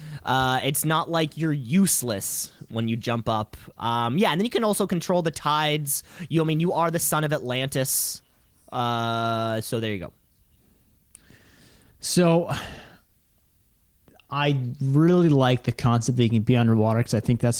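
No technical faults are audible.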